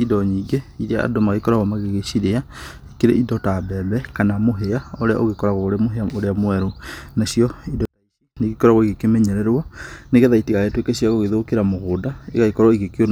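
At 7.85 s the speech suddenly drops to near silence. It stays there until 8.37 s, about half a second. This is a 24-bit alignment error, and it makes the audio too quiet. The samples sat in the low 24 bits of a 32-bit word. They were read as full 32-bit integers. Every value therefore lost its top eight bits of scale, a fall of about 48 dB. The sound stays clean, just barely audible. Full level returns abruptly.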